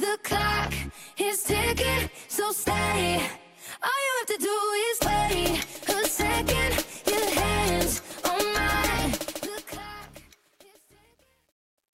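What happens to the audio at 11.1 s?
At 11.1 s the fade-out is in its worst stretch of truncation distortion, from 10.06 s to the end. The fade, starting around 9 s, keeps too few bits without dither, consistent with about 10-bit resolution, so the quiet tail turns gritty.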